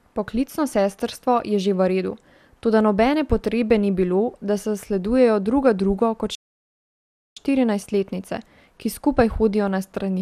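From the very start, the speech has that swirly, hollow quality you get from generation loss, and it's there the whole way through. Consonant attacks sound smeared and the top end is dead above 15.8 kHz. It sounds like the audio was likely run through a lossy codec a few times over, with each pass requantising on a fresh frame grid so the holes and noise pile up. The character points to something like MP2 at 96 kbit/s, though it sounds rougher than that rate alone should.

Then at 6.35 s there's a playback stall. The speech just cuts out mid-flow and the output sits silent for about 1.01 s, picking up again at 7.37 s. That gap is likely the player running dry or its thread getting blocked, so nothing reached the output until it caught up and carried on.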